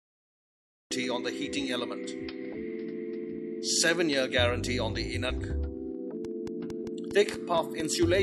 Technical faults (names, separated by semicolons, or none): cut-off start; compressed frames skipped; train of clicks